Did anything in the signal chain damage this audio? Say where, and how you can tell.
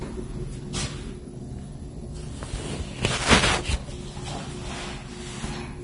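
Yes, at the codec stage: heavy Vorbis compression throughout, likely. Nothing above 10.6 kHz, with grainy, hissy treble, unlike a plain low-pass, and a sound that fits roughly 30 kbps.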